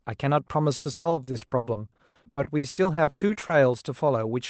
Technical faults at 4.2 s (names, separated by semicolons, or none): none